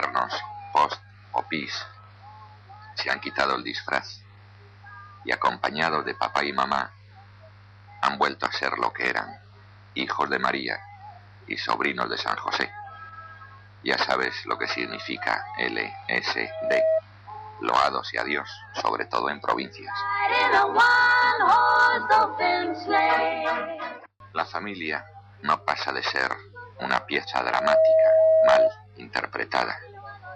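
A microphone is picking up the loudspeaker it feeds, so the loop gain exceeds one at 638 Hz and a loudspeaker feedback squeal results: a steady tone swelling within about 0.4 s, at 16.40–17.01 s and more loudly at 27.40–28.75 s, rising about 5 dB and 10 dB above the audio respectively.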